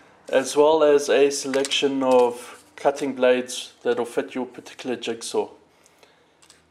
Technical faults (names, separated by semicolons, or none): none